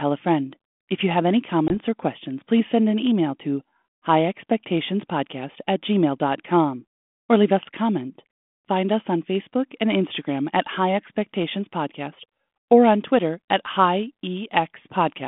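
At 1.68 s, just after "you have any", a packet loss on an ADPCM call drops about one packet, some 20 ms of audio, on this G.726 line at 32 kbit/s. Silence fills the gap. Each ADPCM sample encodes only a difference from a running prediction, so the decoder's predictor and step size drift out of step with the sender's. The result is a hard-edged hole followed by briefly slightly distorted sound, settling by 1.75 s, before "or questions please send".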